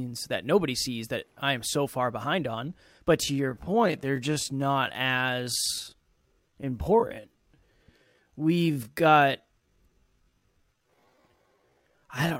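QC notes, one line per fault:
3.20–12.40 s, time-stretched section: from just before "know we've gotten something" the pace drops abruptly to about 0.64x and drags, yet pitch holds, unlike a slowed playback, likely from pitch-preserving stretching.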